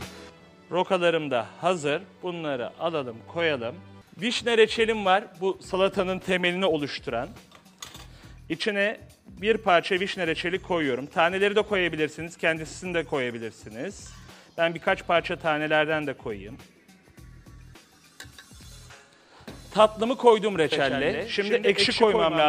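At 20.72 s a second copy of the sound abruptly appears and runs to the end, trailing the original by about a tenth of a second at roughly 5 dB lower, giving a flat, slapback-like doubling with no decay or room colour. This is a doubled audio track, most likely the same signal being mixed in twice, once through a slower path or from a misaligned edit, so the full-band copy sits a fixed delay behind.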